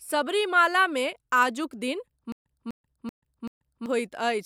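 Stutter with silent gaps runs from 2.32 s to 3.86 s in this speech. A 250 ms burst of the same sound plays four times, each followed by about 135 ms of dead digital silence, so it repeats at an even pace of roughly one every 384 ms. The likely cause is a stalled player or stream that replays its last buffered fragment on each retry and then runs dry, so the speech that belonged in that stretch never arrives.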